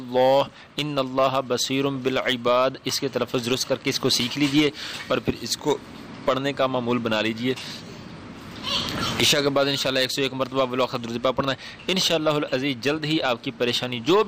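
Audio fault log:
No faults heard anywhere in this clip.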